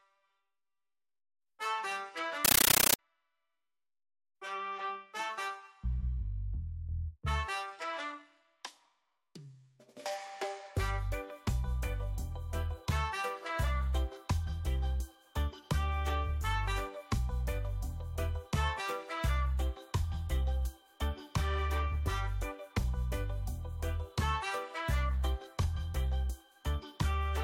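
From 2.45 to 2.99 s, a compressed stream played as audio: an AC-3 bitstream, which fits a 640 kbps Dolby Digital feed, reaches the output undecoded. Each 13.3 ms noise burst, repeating 31.25 times a second, replaces the sound with loud chattering static.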